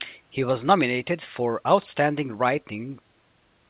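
No technical faults can be heard in this recording.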